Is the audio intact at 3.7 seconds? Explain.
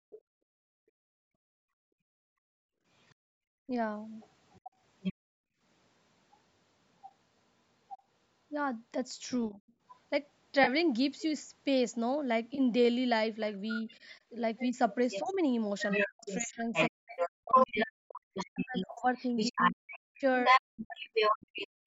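No. Speech suppressed in double talk, from 3.66 to 3.71 s: the talker's voice dips, by roughly 15 dB, for about 50 ms. The likely cause is the echo canceller failing to separate the talker from loudspeaker echo while both sides spoke, so it turned both down.

Other side's voice leaking through, from 3.09 to 9.96 s: a second voice sits underneath, around 10 dB below the talker. It is likely loudspeaker playback that the echo canceller did not fully remove from the microphone.

Background gated by the echo canceller, from 0.0 to 5.61 s: the canceller clamped the microphone while the loudspeaker played, so the room sound drops out, by up to about 39 dB, for roughly four seconds in total across that stretch.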